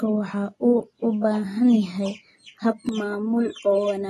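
AAC compression runs through the whole recording, from the start to the end. Nothing is present above 12.1 kHz, so the top is cut off and the speech sounds dull, and the coding damage is plainly audible as smearing and a warbling, fizzy texture. The cause is likely AAC-LC coding at a low rate, one that fits a bitrate around 32 kbps: the encoder quantises its frequency lines coarsely against a hearing model and drops the highest bands.

Channel delay (comb filtering) begins at 2.89 s and lasts to the end of the clip. One channel arrives about 3 ms behind the other, and when the two are summed to mono, what they share cancels at evenly spaced frequencies, the first notch falling around 150 Hz. The fixed notches give this final stretch a hollow, phasey colour.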